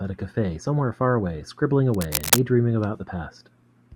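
A speech recording with cable scratch noise from 1.92 to 2.39 s: a dense, uneven burst of scratching and rustling sits over the speech for about half a second, roughly as loud as the speech itself. The likely cause is a worn cable or connector being moved, so its contact resistance fluctuates rapidly.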